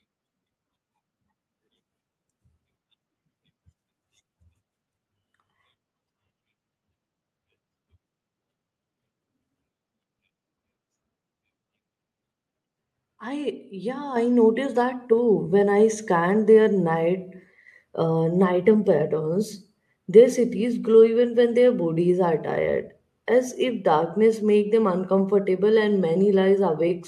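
Microphone volume stepped up at 14.16 s: the call software judged the microphone input too quiet and raised the device's input volume in a single jump of about 7 dB. Because the change happens at the device, before any processing, the speech and the room background rise together at that instant, with no fade, so the level of everything after 14.16 s sits audibly higher. The call codec path, consistent with Opus, keeps content below about 12 kHz.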